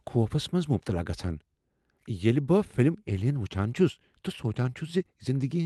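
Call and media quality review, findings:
Findings: none, as the call and media quality review turns up no faults in this speech.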